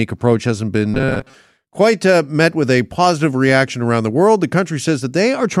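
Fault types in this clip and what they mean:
Robotic sound from repeated short buffers: audio likely arrived too seldom, so a buffer of about 7.5 ms was looped, turning the speech into a rigid 133 Hz metallic buzz from 0.94 to 1.35 s.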